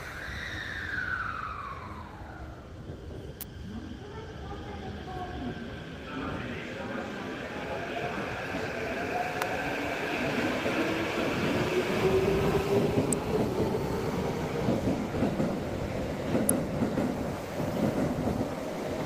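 Sharp snaps at 3.41, 9.42 and 16.49 s sound like an electrical switching spike, likely a nearby switch arcing into the line. The sound continues beneath each snap rather than dropping out.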